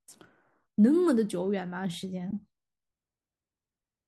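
At 2.31 to 2.33 s the speech drops into a brief soft-edged hole, an AAC frame loss with muting. About 20 ms is silenced, which fits two lost frames of the likely low-delay AAC coding. The overlapping windows fade it out and in, and unlike concealment nothing is repeated to fill it.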